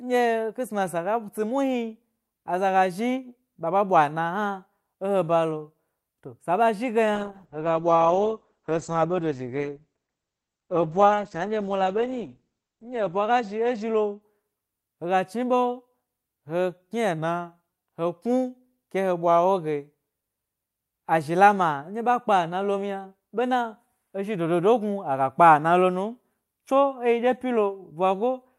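From 7.17 to 14.85 s, a call bitrate drop: the spectrogram's top band vanishes above 8 kHz and the speech turns muffled and rough, consistent with roughly 10 kbps coding.

At 17.18 to 17.70 s, speech slows about 5.7% and drops a semitone (about 101 cents), likely a drift correction step; the spectrogram's harmonics visibly sag, then snap back.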